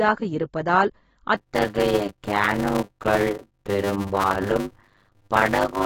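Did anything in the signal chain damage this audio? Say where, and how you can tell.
Yes, two faults. Codec: AAC compression runs through the whole clip, and its damage is plainly audible. The speech sounds dull and smeared, and sibilants have a fizzy, warbling texture. The most likely cause is an AAC-LC encode at a low bitrate, around 24 kbps. At that rate the encoder lowers its cut-off and quantises the remaining bands coarsely against its hearing model.

Driver or buffer: a block size mismatch (padded) starts at 1.37 s and lasts to the end. From there a steady 100 Hz buzz sits under the speech, and the speech slows to about 0.53 times its normal speed while keeping roughly its normal pitch. One stage writes blocks shorter than the next stage reads, and the shortfall is filled with zeros. That inserts a short silent gap every 10 ms, which fits 256-sample writes going into 480-sample reads.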